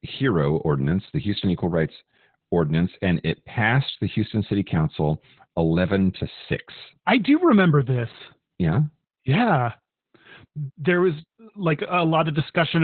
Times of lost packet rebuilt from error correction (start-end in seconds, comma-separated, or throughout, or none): none